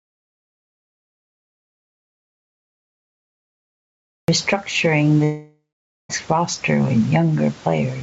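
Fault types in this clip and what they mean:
Gain pumping: The gain swings by around 15 dB, pulled down whenever speech gets loud, so loud and quiet passages end up squashed toward one level. The likely cause is input gain set far too high with a fast limiter clamping each peak. On a waveform the envelope looks flattened.
Audio dropout to silence: The clip opens in silence that is already under way at the start and lasts until about 4.28 s, when the speech cuts in abruptly. There is no room tone at all, which points to the input having likely been lost or muted while the recorder kept writing. The waveform shows a dead flat line, and the spectrogram is completely blank before a sharp vertical onset.
Long network dropout: From 5.24 s to 6.11 s, roughly 860 ms of the audio never arrives. The receiver bridges the hole with a synthetic buzzy continuation of the last sound that fades out, leaving about half a second of silence before speech resumes with that stretch gone. 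The likely cause is lost packets on the call path. On a spectrogram the smeared, repetitive concealment tapers into an empty band, and the waveform shows a decaying tail, then a flat line.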